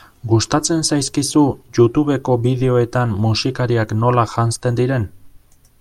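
No technical faults can be heard.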